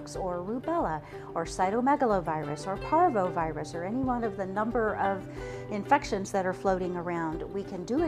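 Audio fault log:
4.04–4.06 s loud pop: a likely voltage spike enters the signal path, adding one sharp pop a few dB above the sound, which carries on underneath.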